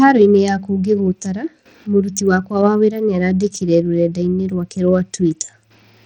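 From start to finish, the speech's treble flickers in and out under a gritty grain, pointing to a bitrate near 80 kbps. Likely Bluetooth SBC compression starving its upper sub-bands of bits. Unlike a steady low-pass cut, the top comes and goes.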